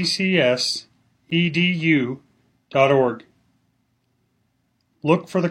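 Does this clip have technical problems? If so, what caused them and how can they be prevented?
Yes: a gap between stream segments at 1.3 s leaves a hard-edged hole of about 10 ms of silence where segment time stamps miss; unlike a dropout, nothing is lost. Align segment time stamps exactly at packaging.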